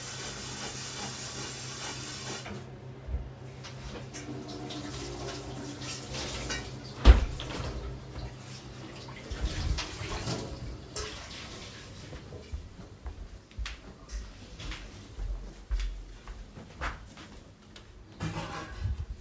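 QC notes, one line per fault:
Nothing stood out on listening to this recording of sounds.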